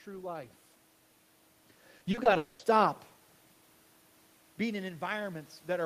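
From 1.97 to 2.37 s the speech breaks up with repeated packet loss, giving a robotic sound. Six short holes, the longest about 40 ms, were each bridged by repeating the preceding sound, so roughly a third of that span is filler. The result is choppy. On a spectrogram the harmonics turn into repeated, smeared blocks with abrupt edges. The waveform shows short stretches that copy one another.

Directly after, from 2.37 to 2.61 s, comes a long network dropout. Its 220 ms is likely missing audio that the receiver filled entirely. No silent gap is left. Instead there is a buzz or hiss continuing the last sound and fading, before real speech resumes with that piece gone. A spectrogram would show a frozen, gradually blurring spectral pattern. The waveform would show a steady repetitive cycle instead of natural variation.

From 4.56 s to the end, automatic gain is rising. The input had fallen by about 15 dB, and the gain control responds by lifting the level slowly over more than a second. 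Speech and room noise therefore swell together rather than the speech alone getting louder. The waveform envelope climbs steadily to the end. On a spectrogram, the background floor brightens along with the speech energy.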